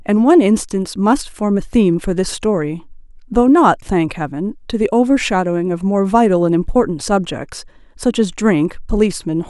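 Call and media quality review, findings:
No faults found.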